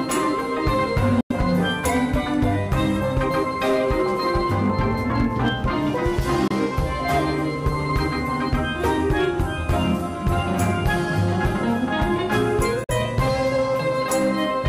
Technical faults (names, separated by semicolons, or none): Bluetooth dropout